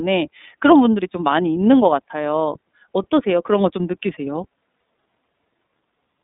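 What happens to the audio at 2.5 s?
At 2.5 s the speech is passing through the iLBC codec, as it does for the whole clip. Nothing above about 3.8 kHz survives, and the usable band runs from 200 Hz to 3.7 kHz, so sibilants sound dull and thin. The codec rebuilds the excitation of each frame on its own. The rough, synthetic texture fits 30 ms frames at about 13.33 kbps. The damage is plainly audible.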